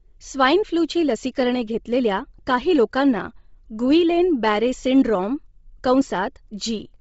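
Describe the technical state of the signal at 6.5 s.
At 6.5 s the speech carries heavy codec damage, likely Bluetooth LC3 compression, present throughout. Nothing sounds above 7.7 kHz. Sparse upper detail turns breathy and grainy, which fits about 24 kbps.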